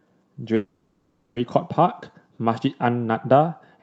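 At 0.55 s the speech stalls and the last bit of sound gets stretched into a buzzy tail that fades out over about 0.81 s. That's a call audio freeze, most likely packets held up on the way so the jitter buffer ran dry and the receiver had to improvise. At 1.38 s, after a silent moment of about 20 ms, the speech picks up right where it stopped, so nothing is lost, just pushed later. The call codec's top end, limited to around 8 kHz, carries through the whole clip.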